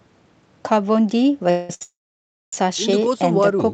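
At 1.50 s the speech, carried over an Opus call path with nothing above 8 kHz, stops arriving, most likely because packets were held up on the network and the jitter buffer ran empty. This is a call audio freeze lasting until 1.70 s. For about 190 ms the receiver keeps the last sound going as a fading buzz. The speech then resumes exactly where it broke off, so nothing is lost, but the timing has been pushed back by that amount.

At 1.74 s a short stall from a late packet follows. One packet is missing when due, so the receiver stretches the preceding sound for 66 ms until it arrives at 1.82 s. The result is a briefly held, slightly buzzy sound with no content dropped.

Almost immediately, at 1.83 s, a second call audio freeze begins, again likely caused by delayed packets draining the jitter buffer. This one runs to 2.53 s, about 0.7 s. The held sound fades out quickly, leaving 0.6 s of silence before the speech resumes intact but later than it should.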